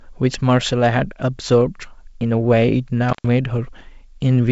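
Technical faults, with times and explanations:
3.09–3.28 s intermittent contact: a loose connection opens for 117 ms, with crackle at both edges and faint hiss in the gap, unlike a clean digital dropout.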